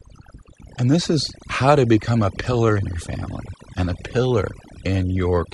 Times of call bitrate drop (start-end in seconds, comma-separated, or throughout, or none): none